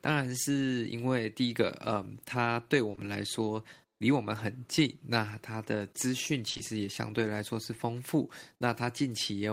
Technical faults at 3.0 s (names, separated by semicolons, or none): short concealed packet loss